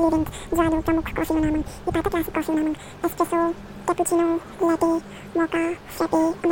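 From start to finish the speech plays back at the wrong sample rate, running twice as fast and a full octave (12 semitones) high, which fits audio recorded near 22 kHz played at 44.1 kHz. On a spectrogram, harmonics and formants sit doubled in frequency, with every event squeezed to half its duration.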